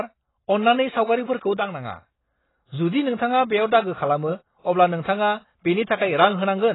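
Throughout the speech, the audio sounds dull and smeared, with nothing above 3.9 kHz and a warbling, fizzy texture on sustained sounds and sibilants. This is likely heavy AAC compression, consistent with AAC-LC at a low bitrate around 16 kbps, which discards high bands and coarsely quantises the rest.

Right after "अन्नानै सावगारिफोरखौ", from 1.57 s to 2.05 s, there is a sudden gain jump. Speech and background noise drop together by about 6 dB in a single step, then return abruptly. This is likely a digital gain change applied without a ramp.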